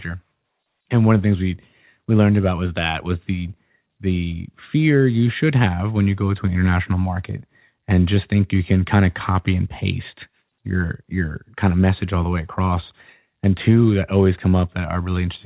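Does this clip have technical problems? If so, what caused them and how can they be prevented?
No, nothing here needs fixing: the speech has the narrow telephone sound that tops out around 4 kHz, which is just what ordinary A-law G.711 telephone coding does when it's working as designed.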